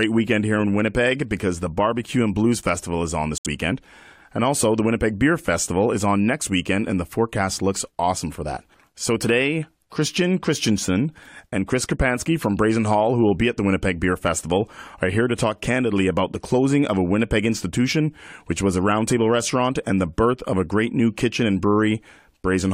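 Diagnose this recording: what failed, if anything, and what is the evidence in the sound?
Codec stage failure: a corrupt frame muted. Right after "is on", the speech drops to silence at 3.38 s and resumes at 3.46 s. The hole is about 84 ms, which fits roughly three codec frames. The decoder rejected damaged frames and substituted silence. Timing stays intact.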